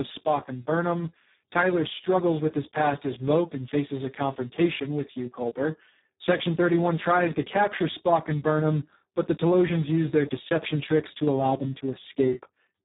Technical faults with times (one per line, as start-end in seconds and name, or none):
0.00-12.84 Speex codec